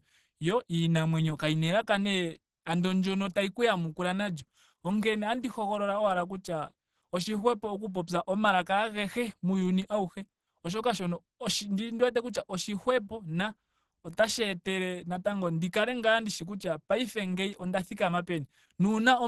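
Opus compression runs throughout the speech, most likely in its hybrid mode at a low rate that fits about 16 kbps. The upper band is coded coarsely and nothing sounds above 12.1 kHz, so the speech is plainly muffled, hoarse and grainy.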